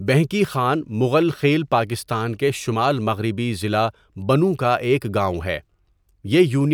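No technical faults can be heard anywhere in this speech recording. There is nothing to place on a timeline, since no moment in the audio departs from how it should sound.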